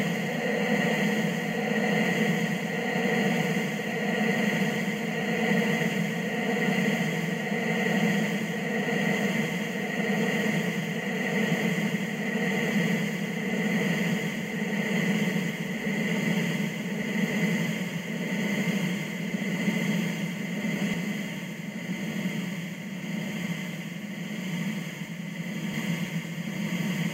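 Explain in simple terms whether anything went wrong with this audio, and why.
From 20.94 to 25.74 s, every sound is followed by a second copy about 85 ms later, like a quick slap echo. This is channel delay (doubling): one channel ran late, likely from a 4096-sample buffer, and mixing both channels into one made that late copy audible.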